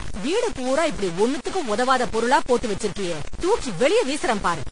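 Throughout the speech, a grainy distortion rises and falls with the speech, nearly as loud as the speech itself, and the quietest stretches sputter between steps. Unlike steady hiss, it follows the signal. This is likely low bit depth without dither, truncated to about 5 bits.

Throughout, the speech also has a hard cut-off with nothing above 10 kHz, and two different kinds of codec smearing are layered together. That doubling sets it apart from a single lossy encode. It points to transcoding between lossy codecs, consistent with an MP3 pass followed by a lower-rate AAC-LC encode.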